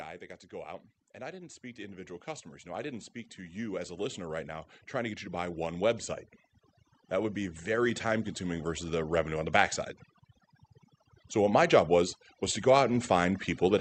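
Right from the start and all the way through, you can hear overdone noise removal. The suppressor was pushed too hard on a noisy source, so individual frequency bands near its noise estimate get pulled way down or dropped entirely. The quieter edges of the speech go with them, and the background drops and breaks up into little twinkling specks.

On top of that there's automatic gain rising, three times. From 1.17 to 6.08 s the gain climbs by about 12 dB, from 7.09 to 9.81 s by about 4 dB, and from 12.39 s it starts creeping up again until the end. Each time, the gain control decided the input was too quiet and eased the level up, so the voice and the processed background swell together gradually instead of jumping. The top end stops around 8 kHz, which fits the Opus call path it went through.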